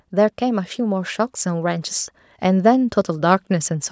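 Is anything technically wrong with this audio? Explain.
Yes. From 0.1 s to 3.79 s there is automatic gain rising: the call's gain control judged the incoming level too low and kept pushing its gain up, by about 6 dB over the span of the clip. Because the gain acts on the whole signal, the speech and the background noise swell together, so the recording grows steadily louder rather than the voice simply getting more forceful. The microphone processing itself is working normally, with nothing above 8 kHz.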